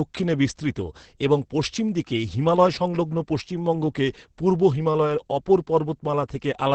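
It's a speech clip with heavy Opus voice compression from start to finish. Nothing comes through above about 8.7 kHz, so there's no air or crisp sibilance, and the voice sounds muffled, a bit hoarse and faintly robotic. That's the SILK linear-prediction coder running in wideband and coding the excitation coarsely, which fits a bitrate around 10 kbps with 20 ms frames. At that rate it drops much of the speech's natural texture.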